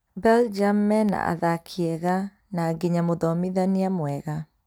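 Periodic USB or driver dropouts run from 0.59 s to 4.59 s: every 0.5 s something stalls the USB link or audio driver, and a fraction of a millisecond of speech is replaced by silence, giving about ten evenly spaced ticks that sound only while there is signal.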